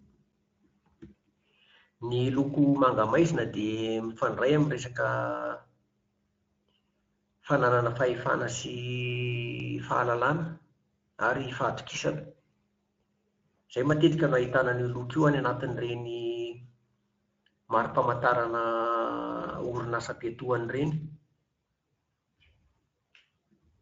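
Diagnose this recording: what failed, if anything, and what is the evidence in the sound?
The failure is at the codec stage: the speech went through Speex, a CELP codec, and the damage is plainly audible throughout. Its coarse, grainy excitation gives a rough, hoarse texture, which fits a mid-quality mode around 16.8 kbps.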